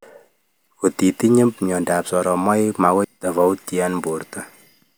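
A brief glitch cuts in at 3.04 s, right after "myandap soromaik": damaged data in the compressed stream, so the decoder lost frame sync.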